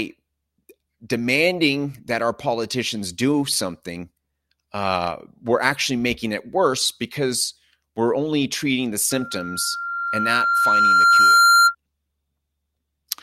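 A piercing 1.4 kHz tone rises out of this speech recording at 9.1 s, swelling over about two seconds to roughly 10 dB above the voice before stopping at 11.75 s. It is loudspeaker feedback squeal: the microphone hears its own loudspeaker, and at 1.4 kHz the loop gain exceeds one, so that tone feeds on itself.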